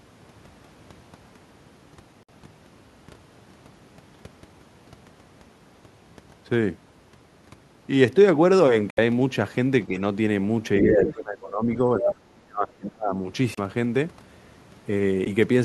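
Bluetooth stall at 2.23 to 2.30 s and again at 8.90 to 8.99 s: the speech drops to dead silence for about 54 ms and then 68 ms before carrying on. This is likely a wireless link losing packets to interference, so the headphones' buffer runs empty and playback waits for the retransmitted audio. Each gap is a clean hole rather than a fade.

Speech suppressed in double talk from 10.82 to 11.69 s: the talker's level sinks by as much as about 20 dB, and the speech thins and dips in pieces. The likely cause is an echo canceller facing simultaneous talk from both ends. Unable to separate the local voice from the loudspeaker echo, it pulls everything down.

Other side's voice leaking through at 11.03 to 11.12 s: a brief scrap of a second voice appears, about 10 dB below the main speech. This is likely the far end's loudspeaker audio that the echo canceller failed to remove from the microphone, slipping through in the middle of the double-talk stretch.

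Speech suppressed in double talk again from 11.86 to 13.13 s: this time the ducking is harsher, reaching about 30 dB. Across each of these two passages, roughly a second of the talker is affected.

Bluetooth stall at 13.55 to 13.59 s and 15.25 to 15.28 s: two shorter dropouts of about 29 ms and 12 ms of silence follow. These are likely the same buffer underruns on the wireless link, heard as brief ticks of silence rather than long gaps.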